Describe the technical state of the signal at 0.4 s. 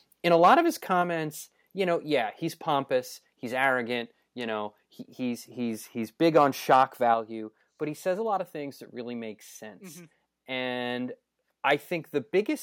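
At 0.4 s you're in the middle of a stretch of microphone overload running from 0.31 to 0.54 s, just before "of his". The input gain was likely set too high, pushing peaks about 3 dB past the converter's ceiling and flattening a few percent of samples, so those loud bits come through harsh and crackly.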